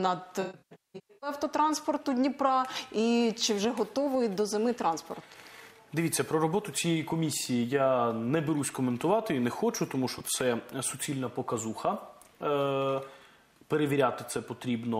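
From 0.41 to 1.30 s there's AAC frame loss with concealment: around 0.68 s of frames drop out across that stretch, the longest gap about a fifth of a second. The decoder patches each hole from the last good spectrum, so it sounds smeared and phasey. A lone lost frame at 10.18 to 10.21 s gives a brief blurred blip.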